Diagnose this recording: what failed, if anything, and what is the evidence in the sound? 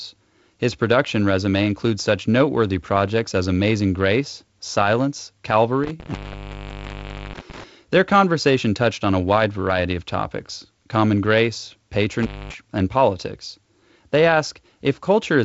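Intermittent contact in the analogue wiring. The sound drops out from 5.84 to 7.64 s, and at 12.21 to 12.55 s, between "of topics common grace" and "and politics". A loose plug briefly opens the line.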